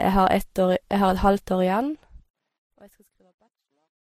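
Across the whole recording, the speech has likely passed through more than one lossy encoder, a case of transcoding between lossy codecs. The second encoder had to spend its limited bits re-coding the first one's damage as well as the speech, so two layers of artefacts sit on top of each other: a mix of artefacts that points to a low-rate MP3 followed by a low-rate Vorbis pass, with nothing above 15.8 kHz.

From 1.64 s, right after "har et halvt år", the fade-out that begins at 1.64 s and runs to the end shows truncation distortion on a fade. The gain stage kept too few bits, which fits about 12-bit resolution, and added no dither, so the falling signal snaps onto coarse amplitude steps instead of gliding down. The tail turns grainy, and from 2.87 s to 4.1 s the quiet remainder is at its grittiest.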